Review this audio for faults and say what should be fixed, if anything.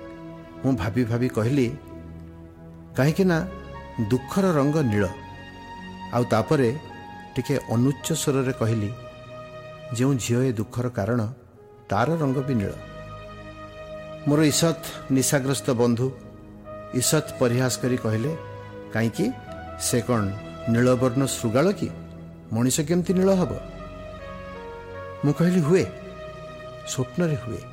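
From 9.0 s right through to the end there's periodic clock jitter. Something is wobbling the converter's sample clock at around 100 Hz, so every component of the sound picks up sidebands roughly 100 Hz above and below it. The sidebands grow with frequency, so the upper content gets a rough, metallic edge. Fix it by cleaning up the clock path: isolate the converter from mains-rate interference and give it a clean, well-filtered reference clock.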